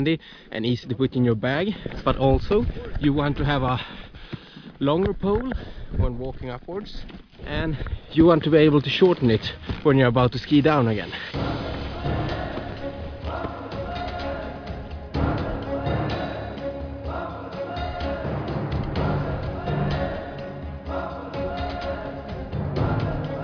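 No technical faults can be heard anywhere in the audio.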